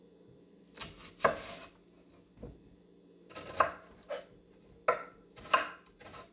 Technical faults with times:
none

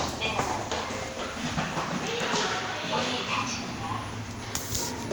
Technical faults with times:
none

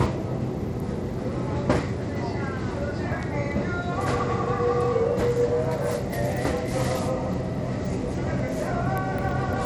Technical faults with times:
0.00-9.65 Bluetooth SBC compression

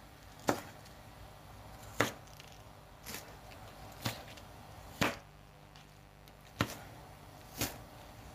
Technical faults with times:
0.00-8.34 mains buzz

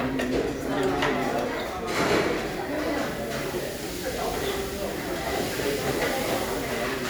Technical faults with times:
none

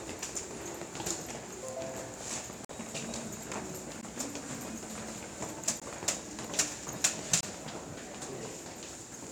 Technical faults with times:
2.65-2.69 block of digital silence
4.01 block of digital silence
5.80 block of digital silence
7.41-7.43 block of digital silence

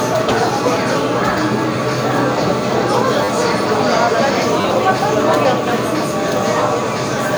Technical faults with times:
1.38 repeated buffer
3.24-3.28 repeated buffer
4.61-4.64 repeated buffer
6.37 repeated buffer

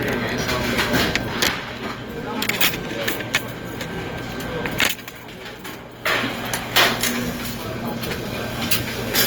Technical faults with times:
0.00-9.26 Opus compression

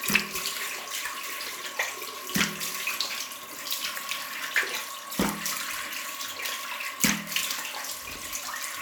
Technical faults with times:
none

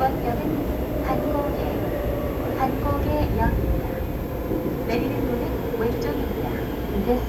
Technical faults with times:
0.00-7.29 switching supply whistle

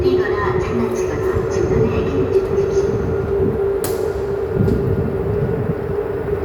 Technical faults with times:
none

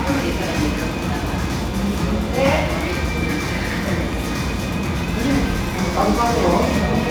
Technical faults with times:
0.00-7.11 crude rate conversion

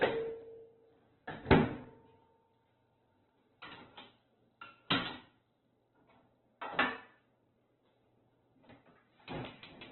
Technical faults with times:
0.00-9.91 Opus compression

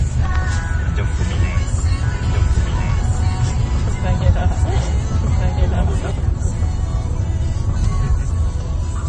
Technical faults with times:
0.00-9.08 MP3 compression
2.03-6.11 doubled audio track

